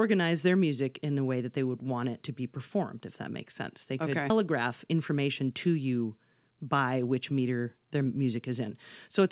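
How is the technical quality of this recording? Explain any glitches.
The recording has two connected glitches a little past the four-second mark, heard through a narrowband call sound with nothing above 4 kHz, which fits the G.711 A-law codec.

At 4.30 to 4.32 s, playback jumps forward with no gap at all. Roughly three-quarters of a second of speech is simply gone, and the audio on either side is butted together almost directly. This is a skip ahead. When audio arrives late and then in a burst, the receiver's jitter buffer can overflow. To catch up, it discards the stretch it is holding and plays the newer audio that is already waiting.

From 4.40 to 5.67 s, the speech sounds slightly rushed, running at about 105% of normal speed while the pitch stays the same. This is a jitter buffer speed-up. The buffer still held more audio than its target, so the receiver trimmed many tiny slices of one or a few pitch periods each. 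Together they removed around 70 ms, which shortens the delay without any audible pitch shift.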